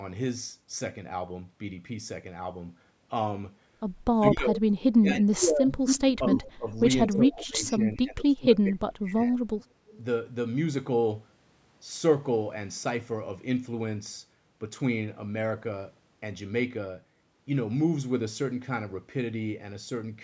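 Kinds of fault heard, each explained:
Speech suppressed in double talk: From 4.13 to 9.53 s the voice dips repeatedly, by up to about 35 dB. An echo canceller likely ducked it while both sides talked.
Echo leak: A copy of the voice returns 222 ms late, near full level at 5.86 and 6.32 s. Faint scraps follow at 9.6 and 9.9 s. This is likely loudspeaker echo that was not cancelled.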